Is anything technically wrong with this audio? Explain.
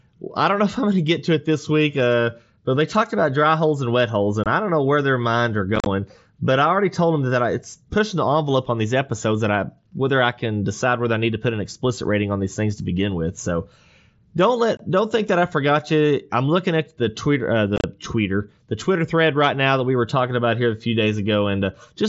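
Yes. The speech has unconcealed Bluetooth headset packet loss. Short holes appear at 4.44 to 4.46 s and 14.77 to 14.80 s, each about 22 ms of missing audio. Two rougher bursts sit at 5.76 to 5.86 s and 17.76 to 17.84 s. There, scattered gaps total about 60 to 70 ms, with the longest run about 30 to 40 ms. Packets between headset and phone were dropped, and nothing filled them. The voice cuts out with hard edges and sounds briefly chopped. The wideband mSBC link carries the rest with light graininess.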